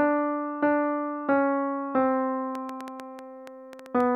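From 2.55 s to 4.02 s a train of clicks rides over the sound: about ten sharp pulses of much the same shape, arriving at roughly 6.9 per second but unevenly spaced, and peaking a few decibels above the audio itself. The likely cause is interference from nearby equipment or a faulty connection or power supply. Unlike vinyl-style crackle, these are sparse, uniform ticks. Unlike dropouts, nothing is missing, and the ticks stay audible even where the sound pauses.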